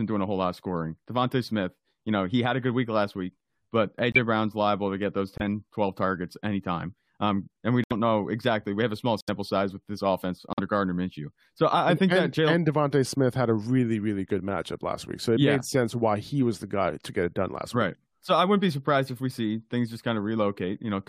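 Speech clip with five abrupt dropouts from corrupt frame muting at 4.12 s after "week last week but", 5.38 s, 7.84 s between "and we" and "know exactly", 9.21 s between "have a small" and "size with this offense", and 10.53 s. Each hole lasts about 60 to 90 ms, which fits two or three damaged codec frames that the decoder rejected and the player filled with silence. Timing continues unshifted.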